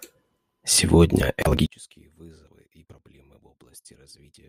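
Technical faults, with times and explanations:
1.66–4.48 s, one channel inverted: speech falls about 31 dB to a faint trace, likely shared content cancelling in mono; waveform collapses, spectrogram nearly blank.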